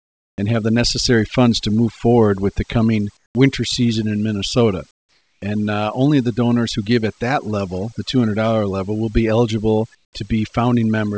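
Overdone noise removal runs through the whole clip. The noise reduction was set too hard. It pulls single frequency bands down or out whenever they sit near its noise estimate. Quiet parts of the speech vanish with them. The background drops and breaks up into twinkling specks. The call path adds its usual coding noise, and nothing is heard above 8 kHz, which fits a wideband call codec.

Comfort noise in place of the background appears four times. From 0 to 0.38 s, before "and have the necessary", the real background gives way to a smoother hiss about 20 dB quieter. From 3.17 to 3.35 s, between "forward with the coming" and "winter season in", the hiss is about 10 dB down. From 4.91 to 5.42 s, before "uh only the donors", it is about 12 dB down. From 9.95 to 10.13 s, it is about 16 dB down. The likely cause is discontinuous transmission: the sender stopped sending in pauses, and the receiver filled them with synthetic noise.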